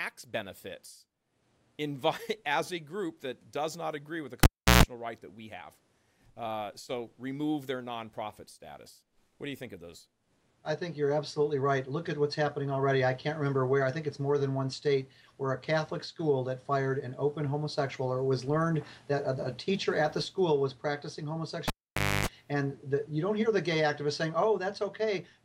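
At 4.43 s a live cable gets pulled and plugged in again. There's a pop, about 0.35 s of near silence, then roughly 0.13 s of 60 Hz mains buzz while only the tip is touching, and another pop as the audio returns at 4.83 s. The same thing happens at 21.68 s, this time longer: about 0.54 s unplugged and roughly 0.28 s of 50 Hz buzz before it comes back at 22.27 s.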